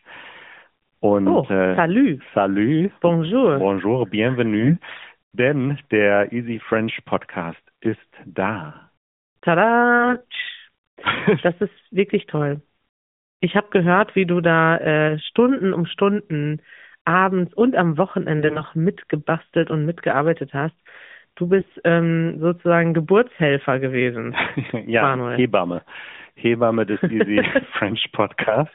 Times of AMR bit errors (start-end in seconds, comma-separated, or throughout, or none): 4.60-5.05, 9.98-10.33, 18.39-18.63, 21.59-21.82, 28.42-28.57